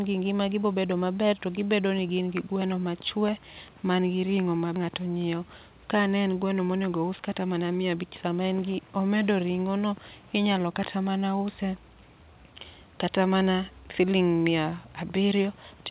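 At 4.76 to 4.78 s the speech jumps abruptly forward with no gap. This is a skip ahead: roughly 0.7 s of audio was dropped while later audio was already waiting, and the two sides were joined directly. From 6.59 to 8.81 s, between "ka ne en gweno" and "omedo ring'o no inyalo", the speech sounds hurried, running at 110% speed at unchanged pitch. This is a jitter buffer speed-up, with about a fifth of a second of pitch periods trimmed to reduce excess delay. Throughout, nothing is heard above 4 kHz, which fits a narrowband call codec such as G.711.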